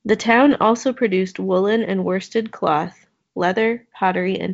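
The speech carries no technical faults, and what can be heard of its G.722 wideband telephone coding is a faint hiss in the upper band and nothing above about 7.7 kHz, which fits the 56 kbit/s mode.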